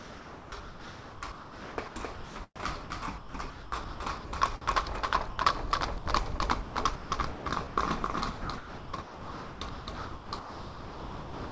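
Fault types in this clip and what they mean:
Doubled audio track: There's a second, full-band copy of everything trailing about 300 ms behind and roughly 5 dB quieter, running the whole length. It has no reverb tail or room colour, so it reads as a clean slapback rather than an echo off walls. The likely cause is the sound being captured twice, once through a slower path, or an edit that left two out-of-step copies stacked.
Sound chopped by the voice detector: The sender's activity detector likely kept flipping between sending and not sending, and each gap got filled with synthetic comfort noise. You hear it from 0 to 2.9 s (about 2 s swapped out), 3.18 to 4.24 s (0.6 s), 4.61 to 5.38 s (0.14 s), 6.38 to 7.77 s (0.55 s), and 8.41 s to the end (about 2.7 s). The sound gets choppy.
Sound dropped by the voice detector: A single short dropout from 5.98 to 6.06 s, where 80 ms of real sound was lost. 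The detector likely mistook a quiet bit for background and stopped sending, so the receiver played steady comfort noise until the detector picked the sound up again. It's brief, but you get a small hole where the sound gives way to flat noise before snapping back.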